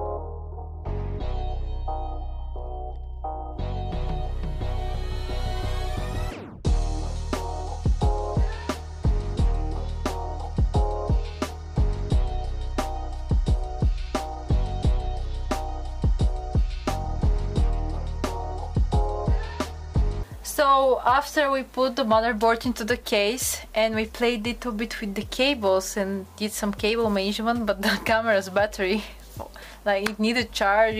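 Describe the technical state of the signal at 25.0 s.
At 25.0 s the signal is intact, with no dropout, clipping, distortion or other technical fault to be heard at that moment.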